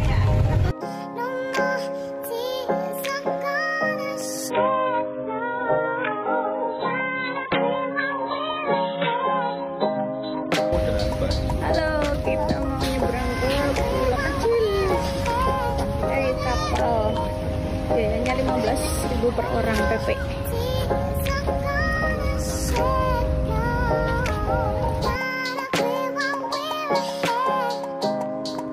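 At 4.50 s the sound suddenly turns dull and thin, with nothing left above about 4 kHz, and a watery, smeared quality creeps in. There is no gap or dropout. Six seconds later, at 10.50 s, full clarity snaps back just as abruptly. This is an adaptive stream at a lower bitrate: the player switched to a much leaner encoding while the connection struggled, and the severe band limit points to roughly 8 kbit/s AAC in place of something near 96 kbit/s.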